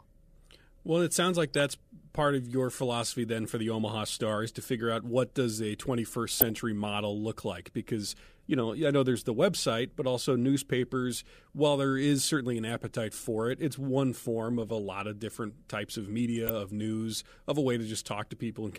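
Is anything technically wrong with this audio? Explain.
Yes, DAB burbling in the speech at 1.48–1.71 s, 6.32–6.50 s, 14.63–14.72 s and 16.36–16.61 s. Bit errors in the MP2 data, at a rate of a fraction of a percent, put short noise blips into single sub-bands and make sub-bands jump in level for up to a frame, over continuing sound rather than the silent gaps of a dropout.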